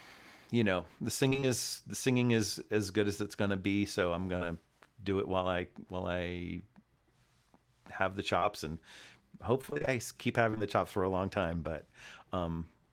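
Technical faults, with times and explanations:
1.29–1.47 s, repeated packet loss (robotic sound): between "you know the" and "is the singing is", four gaps of up to 19 ms arrive in quick succession, about 80 ms missing in all. Each is bridged by extending the sound just before it, so nearly half this stretch is synthetic and it turns choppy and robotic.
4.37–4.43 s, short concealed packet loss: about 40 ms never arrived in time. The receiver stretched the preceding sound across the hole and faded back into the real signal, leaving a brief smear or wobble.
8.39–8.43 s, short concealed packet loss: right after "have the", a 20 ms hole is filled by continuing the last sound and blended back in. It is heard as a brief smear or wobble, and a short consonant here can drop out.
9.61–9.89 s, repeated packet loss (robotic sound): seven gaps, the longest 27 ms and about 140 ms missing in total, follow one another so closely that roughly half the span is patched-in continuation. 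The sound becomes choppy and stuttering, with pieces missing.
10.51–10.62 s, short concealed packet loss: three back-to-back 20 ms losses, the second just before "the chops for a". Each is filled from the sound before it, so the run of patches produces a short smeared, wavering patch.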